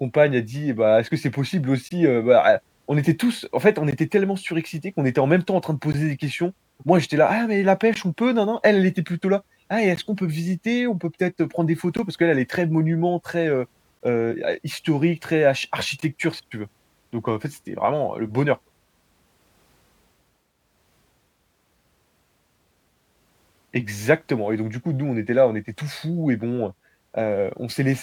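From 1.89 s, right after "que c'est possible", then at 3.91, 5.92, 7.94, 9.96, 11.97, 13.99 and 16.00 s, there's a gap at a join of encoded pieces. Separately encoded two-second chunks were butted together untrimmed, so each join leaves a dropout of about 16 ms (22 ms at the first) in the speech.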